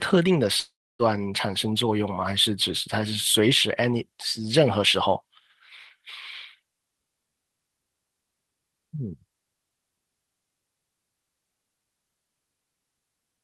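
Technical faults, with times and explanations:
0.59–1.02 s, long network dropout: the speech gives way to a fading buzz, then about 0.27 s of silence, and resumes with roughly 0.4 s missing. Incoming audio likely stopped, so the receiver stretched the last sound before going quiet.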